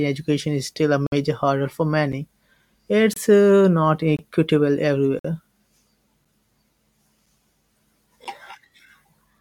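Seven hard-edged silences cut into the speech at roughly one-second spacing, matching 1 s stream segments. These are gaps between stream segments: each boundary's timestamps leave a small hole that playback fills with silence. They fall at 1.07–1.12 s (56 ms), 2.12 s (8 ms), 3.14–3.17 s (28 ms), 4.17–4.19 s (23 ms), 5.19–5.25 s (53 ms), 6.25 s (8 ms) and 8.25 s (11 ms). No audio is lost; the sound simply stops abruptly, then resumes.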